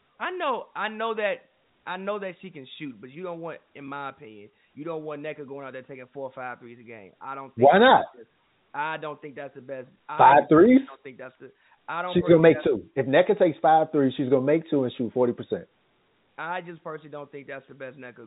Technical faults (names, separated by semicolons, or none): none